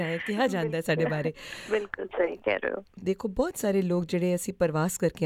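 Nothing technically wrong turns up anywhere in this audio, so there are no problem spots to point to and no causes to chase down.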